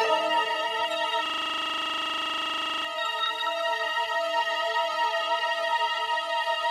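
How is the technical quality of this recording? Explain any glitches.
The recording has one serious glitch, a system hang loop, running from 1.26 s to 2.85 s. For those 1.6 seconds the sound stops moving forward and becomes a rapid, mechanical rattle at 25 Hz, close to a coarse buzz, as a single 40 ms fragment repeats about 40 times. The computer or its audio driver stalled, but the sound hardware kept replaying the same ring buffer, which points to a buffer about 40 ms long, until the system recovered.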